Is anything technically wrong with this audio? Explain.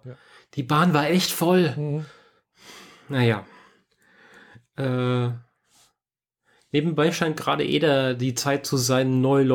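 No, nothing in this speech recording points to a technical fault. There is nothing here that calls for a technical explanation.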